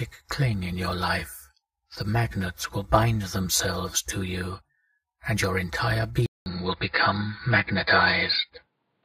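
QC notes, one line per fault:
6.26–9.05 s, input switched to a poorer device: after a gap of about 200 ms the sound turns dull and boxy, with nothing above 5 kHz, a modest shift in level and a faint new background noise sitting well below the signal. This likely comes from the recording input changing mid-take to a different, narrower-band microphone or headset path, which brings its own bandwidth limit, tone, gain and noise floor through to the end.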